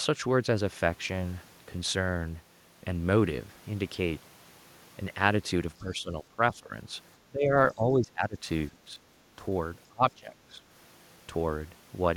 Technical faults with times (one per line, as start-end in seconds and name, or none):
5.82-6.91 speech suppressed in double talk
7.28-8.99 speech suppressed in double talk
9.88-10.62 speech suppressed in double talk